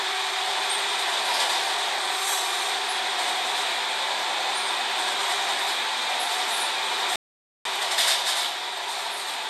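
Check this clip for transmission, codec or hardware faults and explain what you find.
One fault is present: a playback stall. From 7.16 s to 7.65 s the output drops to silence for about 0.49 s, cutting the everyday sound off in mid-flow before it returns. The likely cause is the player running short of buffered data, or its playback thread being blocked, so nothing reached the output until it recovered. It is heard as an abrupt hole in the audio rather than a fade.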